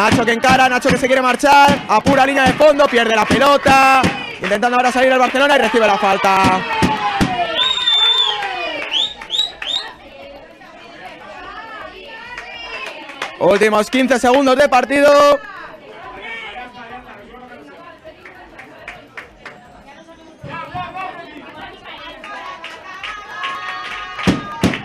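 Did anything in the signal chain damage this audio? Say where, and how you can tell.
Yes: periodic USB or driver dropouts in the driver stage. Ticks every 0.121 s from 0.08 to 24.76 s each skip a few milliseconds; their strict regularity rules out random clicks.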